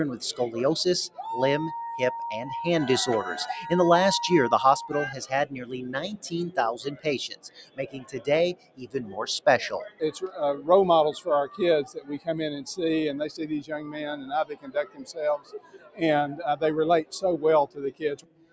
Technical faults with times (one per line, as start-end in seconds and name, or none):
0.00-18.52 noise suppressor applied to music or sounds
1.08-1.23 sound cut by the noise suppressor
7.33-8.21 sound cut by the noise suppressor
8.54-9.17 sound cut by the noise suppressor
11.85-12.28 sound cut by the noise suppressor
14.49-16.01 sound cut by the noise suppressor
17.67-18.52 sound cut by the noise suppressor